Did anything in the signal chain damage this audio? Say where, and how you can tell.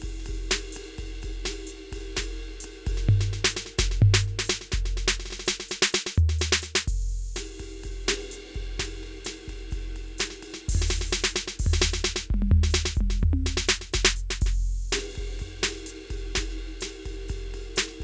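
No, nothing in the chain damaged this music; it went through a call path whose wideband codec, likely G.722 given the way the top end stops at 8 kHz, is simply doing its usual job.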